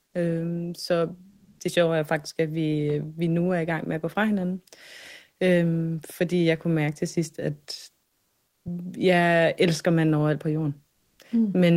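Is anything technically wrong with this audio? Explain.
Yes. Comfort noise replaces the background three times: 1.29 to 1.59 s, before "det sjove er faktisk"; 8.07 to 8.65 s, between "mærke til sidst at" and "jeg elsker manden overalt"; and 10.91 to 11.19 s, after "manden overalt på jorden". The likely cause is discontinuous transmission: the sender pauses during silence, and the receiver fills the gap with synthetic noise. The smoother noise sits about 7 dB above, about 1 dB below, and about 2 dB above the real background.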